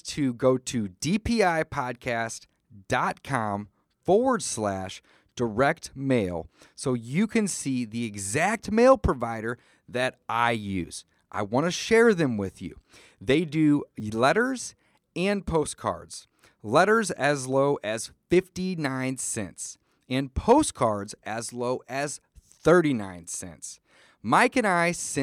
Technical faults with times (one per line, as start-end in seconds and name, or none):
10.84 dropped buffer (overrun)
11.76 dropped buffer (overrun)
14.00 dropped buffer (overrun)